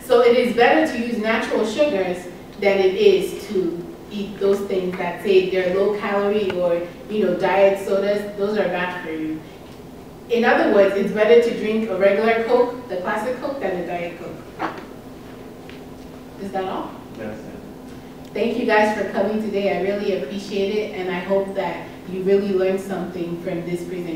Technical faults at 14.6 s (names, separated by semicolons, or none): none